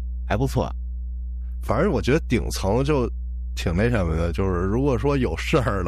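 A steady mains hum at 60 Hz runs under the whole speech track, only a little quieter than the talking, probably a ground loop or nearby transformer leaking power-line tone in.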